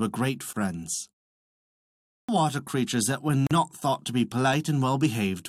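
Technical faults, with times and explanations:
0.53–0.56 s and 3.47–3.51 s, gap at a join of encoded pieces: separately encoded chunks were spliced untrimmed, so encoder delay and padding leave silences of about 29 ms and 41 ms, the second just before "thought to be".
2.07–2.29 s, clipped start after a pause: after about a second of silence the output device is still waking, so roughly 215 ms is swallowed and "water creatures that" starts abruptly.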